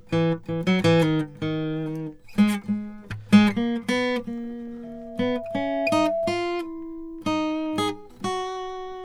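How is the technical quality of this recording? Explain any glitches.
The music is marred by one clear fault, a loudspeaker feedback squeal from 4.83 to 6.45 s. A microphone picked up the loudspeaker it was feeding, and the loop gain rose above unity at 665 Hz. That tone swells over about a second until it is roughly as loud as the music.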